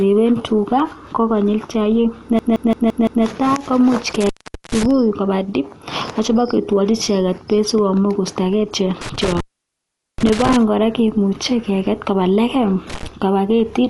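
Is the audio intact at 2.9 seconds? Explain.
No. A system hang loop runs from 2.39 to 3.24 s: the system froze while the audio hardware kept replaying the same ring buffer. One 170.67 ms slice, which fits an 8192-sample buffer, repeats five times at 5.86 Hz as a machine-gun stutter. The whole clip, including this moment, also sounds dull and rough, with nothing above 11.4 kHz. That points to Dolby Digital compression, likely at 64 kbps, where lines without mantissa bits are refilled with dither noise.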